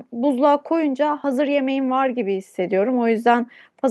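A short speech recording with no technical fault to report. Nothing at any point in the clip calls for a time or a cause.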